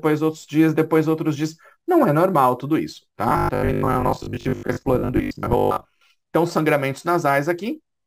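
From 3.29 s to 6.05 s the sound turns robotic from repeated short buffers, a rigid, metallic buzz at 50 Hz. This is likely caused by late audio delivery, with roughly half the time filled by looping the last 20 ms while real audio is skipped.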